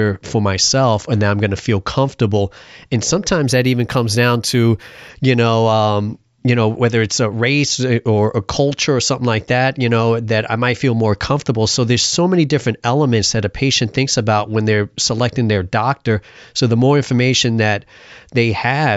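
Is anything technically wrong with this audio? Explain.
Yes. From 3.47 to 5.09 s the speech sounds dulled at the top, with a metallic shimmer on sibilants. This is imaging from linear upsampling: straight-line interpolation filters poorly, leaving a mirror copy of the spectrum at 8 to 16 kHz, about 25 dB down. This fits a conversion from 16 kHz to 48 kHz.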